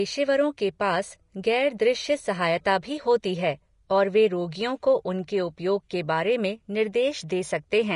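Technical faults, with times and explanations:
Throughout, Vorbis compression. Nothing is heard above 10.6 kHz. The speech treble is hissy and grainy, with roughened tones. This is likely low-quality Vorbis coding, near 34 kbps, where coarse quantisation turns fine treble detail into noise.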